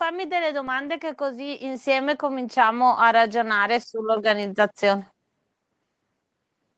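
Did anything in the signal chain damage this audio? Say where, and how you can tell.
Yes: automatic gain rising in call processing. From 0.05 to 5.1 s, voice and background swell together by about 11 dB as the AGC lifts a quiet input.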